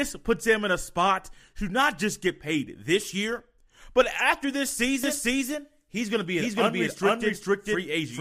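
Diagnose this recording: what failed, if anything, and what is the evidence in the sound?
From 5.04 s to the end, the speech is a doubled audio track: a second full-band copy at about the same level trails roughly half a second behind, starting abruptly with no decay or room colour. That's likely a second, slower capture path or an out-of-step edit.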